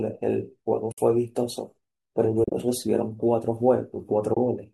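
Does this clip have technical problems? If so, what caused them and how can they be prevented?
Yes. AAC frame loss with muting leaves soft-edged holes in the speech at 0.92–0.98 s (60 ms), 2.44–2.54 s (80 ms lost in scattered pieces, the longest around 40 ms) and 4.34–4.37 s (30 ms). The decoder zeroed the missing spectrum, so the overlapping windows fade the sound out and back in. The gap sizes fit 10 ms frames, likely from a low-delay AAC stream. Forward error correction or a deeper jitter buffer on the transport path would prevent these losses.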